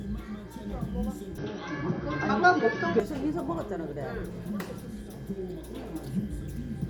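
Input switched to a poorer device from 1.38 to 3.00 s in these sounds: nothing above 6.2 kHz, a level shift of around 5 dB, and faint new noise, likely from a different microphone.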